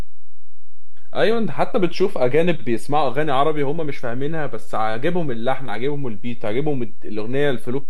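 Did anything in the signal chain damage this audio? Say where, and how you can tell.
Yes. The speech carries a DC offset from start to finish: the whole waveform sits shifted off the zero line by a constant of about -15 dBFS. It isn't audible as a tone, but it shows as steady energy at 0 Hz and eats headroom, so peaks on one side reach full scale sooner. The likely stage is the analogue input or converter, where a bias voltage reached the ADC without a blocking capacitor or high-pass filter to remove it.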